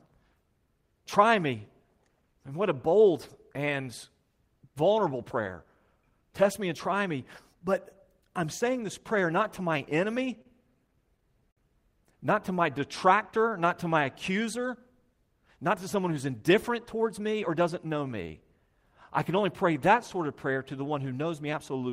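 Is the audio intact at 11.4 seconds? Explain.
No. From 10.87 to 11.59 s packets arrived late, so the jitter buffer ran empty five times, causing repeated stalls (stutter). The receiver stretched the last sound across about 96 ms of gaps, the longest 52 ms, so the speech drags and hiccups while nothing is lost.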